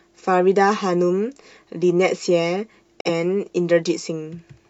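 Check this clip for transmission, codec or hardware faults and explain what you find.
One fault stands out: a digital broadcast dropout in the speech from 3.01 to 3.09 s. The receiver stopped getting decodable frames, or the frames failed their checksum, so it muted and then resumed once good data returned. The sound fades out in about 3 ms and leaves a short hole of silence. The lost stretch of about 43 ms fits a single discarded frame. Packet-loss concealment would fill a gap like this with smeared or repeated sound. Here the gap is clean and silent.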